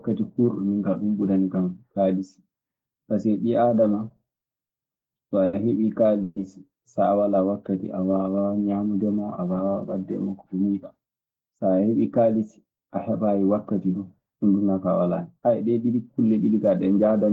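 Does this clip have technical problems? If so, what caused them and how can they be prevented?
Yes. The speech has several network playback faults.

Repeated stalls (stutter) run from 4.09 to 5.05 s, just after "ɓii aadama". Packets kept arriving late. The jitter buffer emptied five times. The receiver stretched the last sound to fill 130 ms, with the longest gap 50 ms. Nothing is lost, but the speech drags. A larger or adaptive jitter buffer on a steadier connection would prevent this.

A short stall from a late packet occurs between 5.45 and 5.55 s. One packet missed its slot. The receiver held the last sound for 80 ms until it arrived, then continued. The sound lingers with a slight buzz or dip. Prioritising voice traffic (QoS) would prevent it.

A call audio freeze lasts from 6.23 to 6.38 s, just before "so a walaa". The sound hangs as a fading buzz or hiss for 130 ms, then resumes where it stopped. 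The likely cause is packets held up in transit, which drained the buffer. Reducing network congestion would prevent it.

A jitter buffer slow-down spans 7.51 to 8.64 s. The buffer ran low or had raised its target delay, so the receiver repeated pitch periods to rebuild a reserve, adding 133 ms. Speech plays at about 89% speed with unchanged pitch. More stable packet timing would avoid it.

A jitter buffer speed-up runs from 10.53 to 12.88 s, between "waɗde e makko ko" and "a heɓaayi wakkati". The buffer held more audio than it aims for. The receiver cut roughly a third of a second of pitch periods. Speech runs at about 110% and sounds hurried. Smoother delivery would prevent it.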